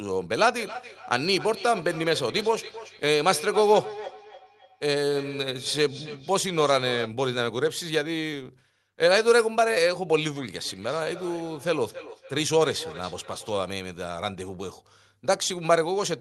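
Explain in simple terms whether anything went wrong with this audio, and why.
Feedback echo between two devices is heard from 0.57 to 7.17 seconds and again from 10.61 to 13.72 seconds. Each word comes back about a third of a second later, quieter and thinner. Two nearby devices on one call are feeding each other's sound back in.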